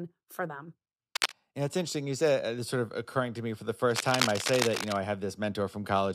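At 1.15 s, just after "for them", a burst of cable scratch noise runs to 1.32 s at roughly the level of the speech. A second, longer one follows "to me for the", from 3.91 to 4.96 s, a little quieter than the speech. Both are dense, uneven scratching, likely from a worn cable or connector being moved. Unlike steady hiss or isolated clicks, the crackle is irregular and clustered.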